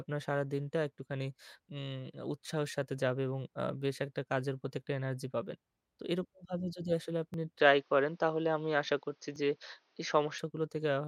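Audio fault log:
7.34 s and 9.36 s: repeated buffer. A 10 ms slice of sound plays twice in a row each time, with a hard join at the repeat. New audio arrived late, so the last buffer was replayed. With so short a piece, each event is a brief click or buzz.
7.60–10.38 s: input switched to a poorer device. The sound suddenly turns dull and boxy, with nothing above 6.5 kHz. The level shifts by about 5 dB, and a faint new noise floor appears. There is no gap at the change. A likely cause is a mid-recording switch to a narrower-band microphone or headset profile.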